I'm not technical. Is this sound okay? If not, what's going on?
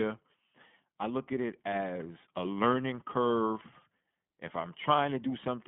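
No. The speech went through the iLBC codec, a phone-call compressor that rebuilds each 20 ms slice on its own and keeps only roughly 200 Hz to 3.5 kHz. Throughout the clip, the speech sounds thin, muffled at the top, and noticeably rough and synthetic.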